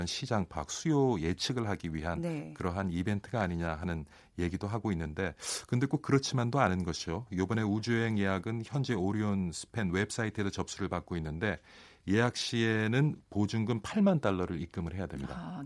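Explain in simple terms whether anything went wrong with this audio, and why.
Nothing went wrong: the speech comes through intact, with no audible faults anywhere in the recording.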